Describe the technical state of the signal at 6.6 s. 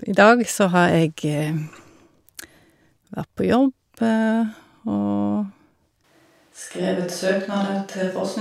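A switch to a distant microphone is under way at 6.6 s, beginning abruptly at 6.04 s and lasting to the end of the clip. The speech turns roomy and hollow, with thinner bass, which points to the close microphone likely dropping out and a pickup further from the talker taking over. There is no clear drop in level, and the room noise sits roughly 35 dB below the speech.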